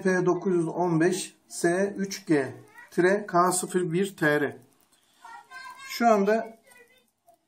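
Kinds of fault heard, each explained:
Nothing stood out on listening.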